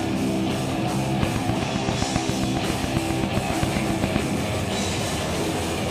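From 1.23 to 4.17 s there's a train of clicks, about twenty sharp pulses ticking at a steady 7.5 per second and poking roughly 15 dB above the sound. That evenly repeated, same-shaped popping likely comes from interference from nearby equipment or a faulty connection or power supply.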